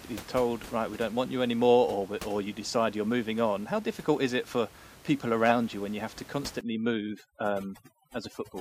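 From 6.61 s to the end at about 8.6 s, right after "when you have to", the background drops and breaks up into twinkling specks. This is overdone noise removal. A noise reducer set too aggressively is shutting individual frequency bands down whenever they sit close to its noise estimate, and the quieter parts of the voice are stripped away along with the noise. Up to that point the room noise sits about 20 dB under the speech.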